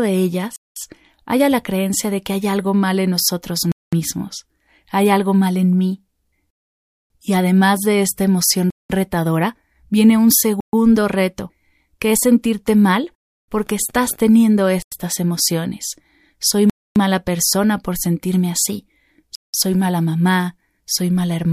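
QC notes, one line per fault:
0.56, 3.72, 6.50, 8.70, 10.60, 14.82, 16.70 and 19.35 s, Bluetooth stall: speech cuts to silence for 0.09 to 0.6 s, then resumes. Likely the headphone buffer ran dry awaiting resent packets.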